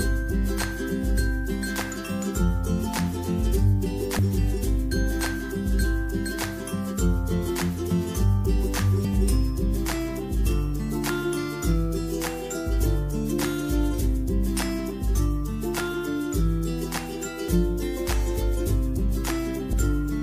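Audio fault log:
4.18, 9.04, 17.48 and 19.73 s, compressed frames skipped: the audio jumps ahead by roughly 70, 50, 30 and 50 ms, which points to whole 26.1 ms frames going missing or rejected by the decoder.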